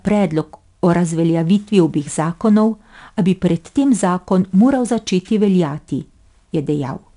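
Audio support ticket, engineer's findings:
4-bit ADPCM compression, whole clip, 0 to 7.2 s. Gritty hiss riding loud speech, rising and falling with level. Plainly audible. Coarse 4-bit prediction steps. Attacks smeared where the step size lags. Nothing above 10.6 kHz, consistent with an 89 kbps stream.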